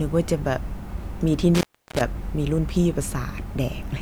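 From 1.55 to 2.01 s the speech suffers an intermittent contact: a loose connection briefly opens, cutting the signal for about 0.34 s. Crackle marks each edge, with faint hiss between. The waveform collapses to a near-flat line bracketed by spiky bursts, and the spectrogram shows a dark gap edged by broadband vertical streaks.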